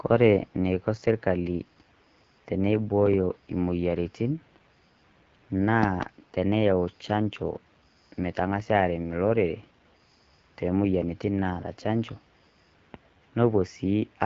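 AMR wideband (HD Voice) codec damage runs through the whole clip. The speech is rebuilt from a pulse-excited model of the vocal tract, with shaped noise standing in for the top band. It sounds plainly rough and raspy, which fits one of the lowest rates, around 8.85 kbit/s. Nothing is heard above 7.6 kHz.

A loud pop, heard as two sharp clicks well above the speech, lands between 5.83 and 6.05 s, just before "teneyau chaanjoo". The likely cause is a sudden voltage step from a switch, plug or static discharge, and the speech carries on beneath it.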